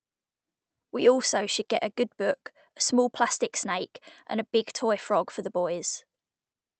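Nothing in this speech recording stands out as faulty.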